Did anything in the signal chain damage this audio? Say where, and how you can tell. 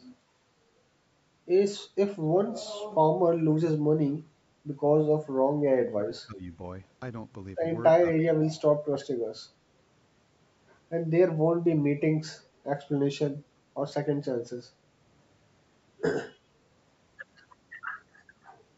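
Yes. The call processing stage's echo canceller gated the background between 0.28 and 0.37 s. It clamped the microphone while the far end played, so the room tone dips by about 6 dB for a few tens of milliseconds and then recovers.

From 5.9 to 6.53 s the speech is pulled down by roughly 25 dB for most of that span. This is likely speech suppressed in double talk: with both sides active, the canceller couldn't tell the talker from loudspeaker echo and attenuated everything.

At 8.21 to 8.33 s a faint delayed copy of the speech appears 337 ms behind the original, about 20 dB below it. This is likely an echo leak, where the far end's loudspeaker pickup slipped past its canceller and returned down the line.

At 10.61 s and 13.92 s the audio jumps forward with no gap. The missing pieces are roughly 40 ms and 10 ms. These are likely dropped buffers from a driver overrun, where unread samples were overwritten and the remaining audio was spliced together.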